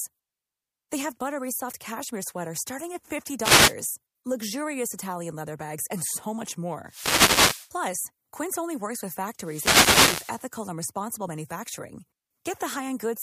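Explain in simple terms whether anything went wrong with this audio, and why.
Three times a burst of hiss breaks into the speech, and each is a wireless microphone noise hit: from 3.40 to 3.75 s, from 6.86 to 7.72 s, and from 9.38 to 10.46 s. The radio link between the mic and its receiver briefly faded as reflected signals cancelled each other out, so the receiver's own static rose up. Each one sounds like a quick swish of noise.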